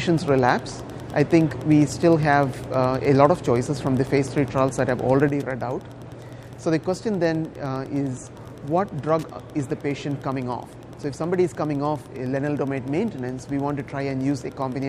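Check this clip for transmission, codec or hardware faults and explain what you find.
Two faults stand out. Throughout, a steady ticking about ten times a second, well below the sound at roughly 30 dB down, is Wi-Fi interference: a nearby radio's 102.4 ms beacon rectified by the audio circuit. At 5.29 s, the sound and its background noise drop together by 6 dB and stay there to the end, a sudden gain jump, likely a digital gain change applied without a ramp.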